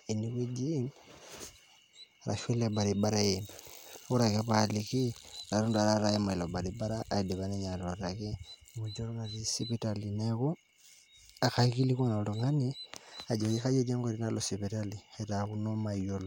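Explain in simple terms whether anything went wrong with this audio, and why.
Nothing went wrong; the speech sounds as it should.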